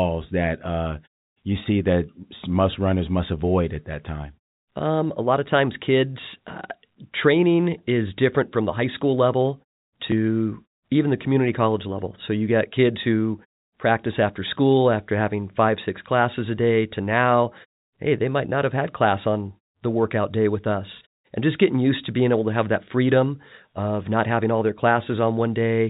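The speech comes over a G.711 A-law call path at 64 kbps with nothing above 4 kHz, and the background falls silent in the pauses between phrases before returning with the next sound, with no technical fault anywhere in the recording.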